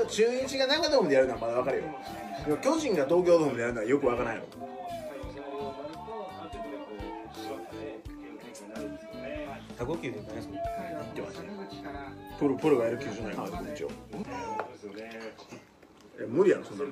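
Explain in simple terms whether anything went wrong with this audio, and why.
Compressed frames skipped at 0.79, 9.76, 12.26 and 13.33 seconds. At each point the sound jumps forward, losing roughly a tenth of a second at 0.79, about a fifth at 9.76, and around 0.15 seconds at the last two. Compressed audio is stored in small blocks, here about 46 ms each, and a few blocks were missing or rejected as damaged, so playback leapt past them.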